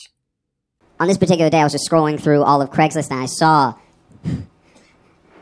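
Speech recorded at one sample rate is played back faster with no conversion, a wrong sample rate that fits 16 kHz audio played at 22 kHz. Throughout, it runs 1.38 times fast, pitched about 5.5 semitones high.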